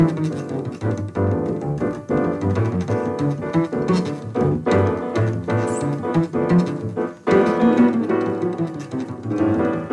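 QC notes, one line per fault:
No technical faults are audible anywhere in the audio, and the signal holds continuity throughout.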